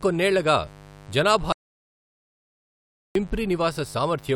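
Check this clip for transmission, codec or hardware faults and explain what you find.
Two faults are present: a mains buzz under the whole recording and one long dropout to silence.

The mains buzz runs from start to end. It sits on a 50 Hz base with sharp harmonics stacked high above it. Switching spikes from a dimmer, rectifier or poor shielding are getting in twice per cycle. It sounds like a steady, raspy hum well below the speech.

The audio dropout to silence runs from 1.52 s to 3.15 s. About 1.63 s of speech is simply missing. The input was likely lost for that stretch while silence kept being written. The speech cuts off abruptly, then resumes mid-flow.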